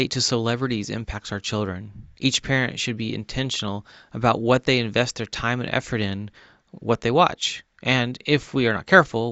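No technical faults can be heard anywhere in the recording.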